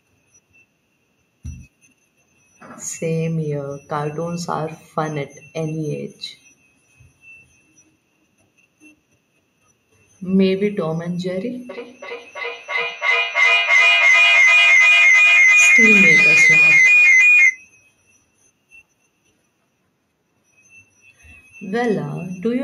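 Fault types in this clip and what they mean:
feedback howl: a second device in the same room is picking up the loudspeaker output and sending it back into the call, so each pass round the microphone-to-loudspeaker loop comes back louder instead of decaying. From 11.7 s the repeats build rather than fade and narrow into a tone around 3 kHz, pulsing roughly every 300 ms, the loop's round-trip delay. It peaks about 8 dB above the speech and stops at 17.62 s when the loop is broken.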